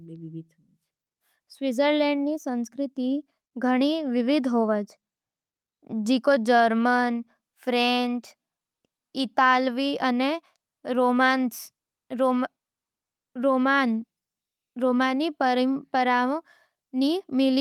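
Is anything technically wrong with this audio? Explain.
No, nothing technically wrong can be heard anywhere in this speech recording.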